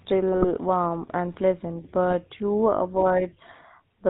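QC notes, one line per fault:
throughout: GSM full-rate codec. The vocal tract is modelled over sparse pulse excitation, consistent with 13 kbps full-rate coding, giving a plainly buzzy, gravelly speech quality with nothing above 4 kHz.
0.32–0.51 s and 2.10–2.14 s: GSM bit errors. Corrupted filter, pitch or gain values reach the decoder, fitting a bit error rate near 1%, so the speech breaks into squawks and gargling.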